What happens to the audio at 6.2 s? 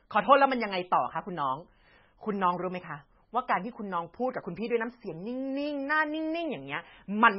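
At 6.2 s the speech sounds watery and swirly, with a dull top end that stops sharply at 5.5 kHz, and consonant attacks are smeared rather than crisp. The damage is not confined to that moment; it runs through the whole clip. The likely cause is heavy MP3 compression at a very low bitrate, consistent with around 16 kbps. Starved of bits, the encoder discards everything above the cutoff and zeroes weaker frequency lines, which flicker on and off between frames.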